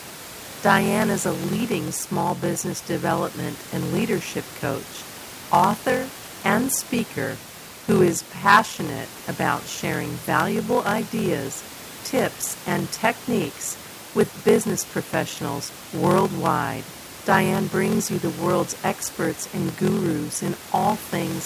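A block size mismatch with zero padding runs through the whole clip: each block arrives short and is filled out with silence, putting a 43.1 Hz buzz under the speech, which fits 1024-sample reads, and slowing it to 0.861 times normal speed at unchanged timbre, while the room noise sits about 20 dB below.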